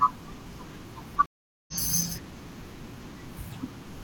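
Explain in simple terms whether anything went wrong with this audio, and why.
At 1.26 s the speech suddenly drops out for almost half a second, then resumes at 1.74 s about 0.4 s further along, so a short stretch is skipped. This is a stream reconnect: the connection broke, the player went silent, reconnected, and picked up the live stream later.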